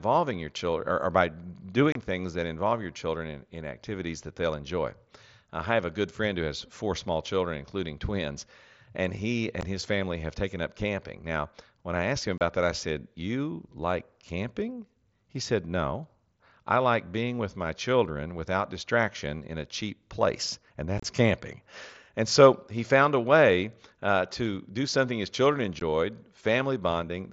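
Unconcealed Bluetooth headset packet loss drops short stretches of speech between headset and phone, leaving abrupt silent holes: about 30 ms at 1.92 s before "things that involve your", 15 ms at 9.61 s, 30 ms at 12.38 s, a choppy 45 ms scattered from 20.98 to 21.04 s after "a cheap place and", and 15 ms at 25.80 s after "do something his children". These gaps sit within the mSBC wideband headset codec's light graininess.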